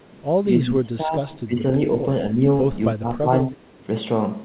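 The speech dips in five places, from 0.64 to 1.3 s, 1.46 to 1.67 s, 2.33 to 2.43 s, 2.93 to 3.29 s and 3.52 to 3.72 s. The deepest drop is about 20 dB early on, and the 2.3 s dip is only a slight sag. These are likely speech suppressed in double talk: the echo canceller mistook the talker for returning echo and pulled the level down. The whole clip stays within the narrow telephone band, with nothing above 4 kHz, which fits a G.711 call codec.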